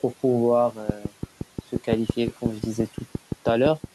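From 0.90 to 3.85 s a train of clicks ticks at a regular 5.8 per second, about twenty sharp vertical lines on a spectrogram, likely interference or a faulty connection.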